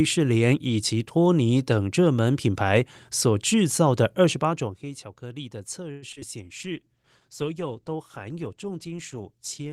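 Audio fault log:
5.91–6.23 s, repeated packet loss (robotic sound): four gaps in about a third of a second, the longest around 106 ms. Most of the lost audio gets patched by stretching the last bit of sound, so it turns choppy, with short pieces simply missing.
6.41 s to the end, call bitrate drop: the last three seconds or so turn coarse and watery, with the top end dulled. That fits the bandwidth estimate falling and the encoder being squeezed from around 40 kbps down to 17 kbps.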